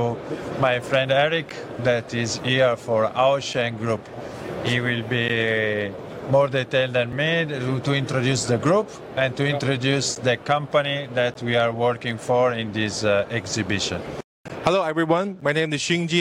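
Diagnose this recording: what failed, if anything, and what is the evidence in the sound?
A block of digital silence, 5 to 15 ms long, appears at 1.49, 5.28, 7.12, 10.15, 11.34, 14.48 and 15.41 s, pointing to the driver or buffer stage missing its fill deadline. The abrupt cut-outs and returns, not a fade or smeared concealment, distinguish these from network packet loss.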